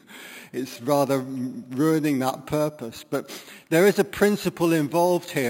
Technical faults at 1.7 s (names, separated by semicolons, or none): imaging from sample-and-hold upsampling